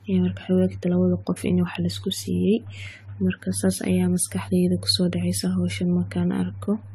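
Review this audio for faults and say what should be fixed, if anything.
Generation loss runs through the whole clip. The speech sounds swirly, smeared and hollow, more so than a single lossy pass would leave it. Consonant attacks blur. Nothing is present above 17.3 kHz. The character points to an AAC-LC chain near 64 kbit/s. The likely cause is repeated decoding and re-encoding, around seven times. Each pass quantises again on a shifted frame grid, so noise and spectral holes pile up.

Keep a lossless master and encode to a lossy format only once, at the final delivery step.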